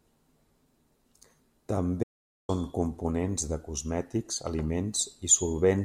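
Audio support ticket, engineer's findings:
Speech cuts to dead digital silence at 2.03 s, no room tone, and resumes at 2.49 s on "components de cosmètics". Audio dropout to silence, about 0.45 s lost. Likely an input link or device dropped while the recorder kept writing zeros.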